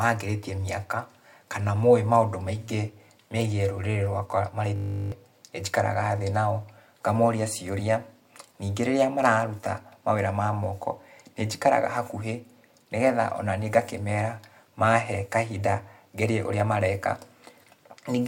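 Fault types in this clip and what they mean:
System hang loop: from 4.76 to 5.12 s, the driver or system stalled while the sound hardware kept replaying its ring buffer. A 20 ms slice of speech repeats 18 times, producing a steady 50 Hz buzz, and roughly 0.4 s of audio is lost.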